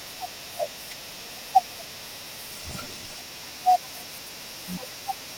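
At 4.10 s to 4.27 s the audio shows chunks out of order. One block of about 85 ms was delivered or written one block late, so it plays after the block that should have followed it. The two blocks swap places. Nothing is missing, but the speech jumbles briefly, with three abrupt joins around the swapped pair.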